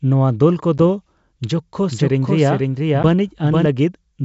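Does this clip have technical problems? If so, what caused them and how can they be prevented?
Yes. Packet loss on an ADPCM call appears at 0.78–0.80 s, just after "ᱱᱚᱣᱟ ᱫᱚᱞ", and again at 3.03–3.05 s. Each gap is a hard-edged hole of about 10 ms, consistent with a single lost packet filled with silence. The receiving decoder's adaptive predictor and step size then no longer match the sender's, so the sound resumes with slight distortion before settling within a few tens of milliseconds. Prevention: carry the call over a network path with jitter buffering and packet-loss concealment.

A doubled audio track runs from 1.90 to 3.66 s. A second full-band copy trails the original by roughly half a second, about 5 dB quieter, and starts and stops abruptly. It has no reverberant tail or room colouring, so it is not an acoustic echo. The likely cause is the same signal being captured a second time through a slower path, or an edit that left two offset copies. 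The G.722 wideband coding underneath, at 64 kbit/s, carries the audio normally with at most a faint upper-band hiss. Prevention: route each source through a single capture path and check edits for overlapping duplicate regions.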